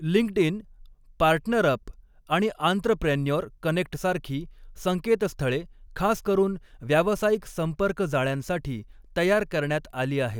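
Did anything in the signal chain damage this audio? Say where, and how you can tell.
No, no damage from any stage is audible here.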